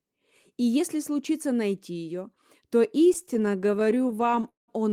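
Speech; after "случится найти ее то", from 3.13 to 4.70 s, repeated stalls (stutter): late packets kept emptying the jitter buffer, so concealment stretched sound by 484 ms in total, with the longest gap at 190 ms.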